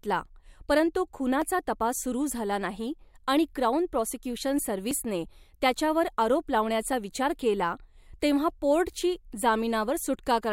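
At 1.42 s, just before "तपास सुरू झाला नाही", at 4.91 s after "नाही आणि क्राउन प्रॉसिक्यूशन", and at 6.93 s between "त्याच्यावर आरोप" and "विचार केला तेव्हा पोर्टची", the speech jumps ahead by roughly 5 to 10 ms. This is likely a dropped buffer (overrun), with samples overwritten before being read. Unlike a dropout, there is no silent gap, only a splice.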